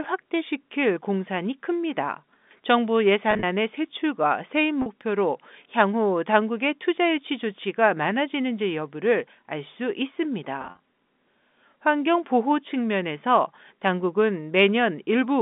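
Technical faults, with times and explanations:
3.31–3.43 s, 4.82–4.86 s, 10.62–10.80 s: packet loss with pitch repetition. About 80, 40 and 110 ms of audio are lost in short gaps, each bridged by repeating the last pitch period, so the sound briefly turns buzzy and held.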